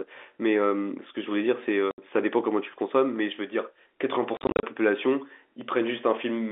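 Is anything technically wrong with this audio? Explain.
Yes. The speech is carried as G.711 A-law telephone audio, held to the 300 Hz to 3.5 kHz line band. At 1.91 to 1.98 s and again at 4.37 to 4.63 s, the sound drops into hard-edged silences. This is packet loss filled with silence. The first gap is 70 ms, which fits seven 10 ms packets. The second loses 180 ms scattered across 260 ms, with the longest run lasting 40 ms. At 3.16 s and 5.61 s there are single sharp clicks, likely dropped samples: a fraction of a millisecond is missing, so the waveform jumps abruptly.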